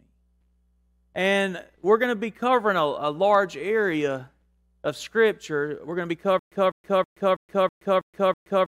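Speech; from 6.39 s, after "going to be", a stutter with silent gaps runs to the end. A 200 ms fragment repeats seven times, each followed by 124 ms of digital silence, likely from a stalled stream; the dead gaps distinguish it from a seamless loop.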